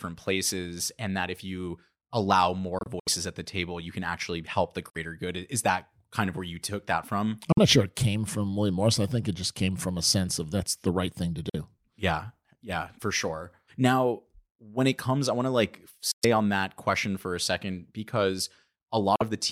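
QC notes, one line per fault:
2.79–3.08 s, 4.90–4.97 s, 7.52–7.59 s, 11.49–11.56 s, 16.11–16.25 s, 19.16–19.22 s: Bluetooth dropout. The speech cuts abruptly to silence, then resumes further along as if it had kept playing, likely because packets were lost on the wireless link. Most gaps are about 46 ms, after "can actually help the" and "the right thing to". The gap between "I want to like" and "on that question for" is 116 ms. At 2.79 s, 116 ms is lost in pieces across about 280 ms, with the longest hole about 70 ms.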